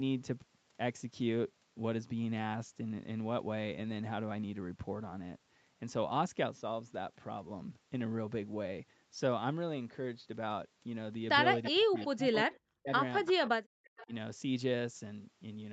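At 11.63 to 11.71 s a brief echo leak appears: a faint copy of earlier speech, about 15 dB below the main talker, trailing by 340 ms. The likely cause is a far-end loudspeaker whose echo canceller let part of its own playback back into the microphone. On a spectrogram it shows as a weak duplicate of the harmonic pattern, shifted right by a third of a second.

From 11.71 to 12.91 s comes speech suppressed in double talk, likely from the canceller failing to tell the near talker from the echo and ducking both. Roughly a second of speech is affected, dipping by as much as about 40 dB. The waveform envelope collapses in chunks, and the spectrogram shows the dips across a band that here stops near 8 kHz.

Within and after that stretch, further 340 ms echo scraps appear at 11.97 to 12.06 s and 13.25 to 13.33 s, each about 20 dB down. Suppression returns at 13.32 to 13.51 s with a drop of about 30 dB. 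The last echo, at about 25 dB down, runs from 13.85 to 14.07 s, and the final dip of about 15 dB falls at 14.04 to 14.12 s.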